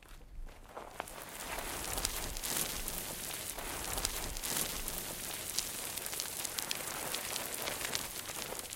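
At 3.53 s a stream segment is repeated: the player queued the same two-second chunk twice, so the sound from 3.53 to 5.53 s plays again, adding 2 s to the timeline. The repeat is heard as a sudden jump back, with the preceding material recurring unchanged.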